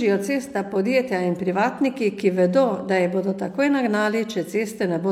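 No technical faults can be heard anywhere in the speech. Nothing in the audio breaks, drops out or changes from one moment to the next.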